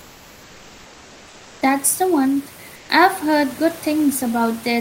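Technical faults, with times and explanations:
0.00–1.61 s and 2.75–2.89 s, comfort noise in place of the background: the real room noise drops out and a smooth, featureless hiss sits there instead, about 3 dB and then about 2 dB quieter, the second one between "the one" and "I've heard". That's likely the sender's discontinuous transmission (Opus DTX) pausing during quiet stretches, with the receiver synthesising stand-in noise until sound resumes.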